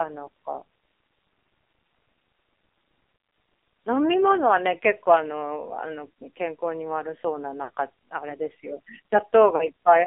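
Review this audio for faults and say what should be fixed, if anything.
AMR narrowband mobile codec throughout: the speech is confined to roughly 300 Hz to 3.6 kHz and sounds heavily buzzy and synthetic, which points to a low mode near 6 kbps. Carry the call on AMR-WB or a higher AMR-NB mode to keep more bandwidth and detail.

Lost AMR speech frames at 3.16 to 3.32 s, 7.64 to 7.71 s and 9.56 to 9.67 s: the decoder repeats the last good settings at falling gain, so the sound smears and dips briefly. Improve radio coverage or add error protection to reduce frame loss.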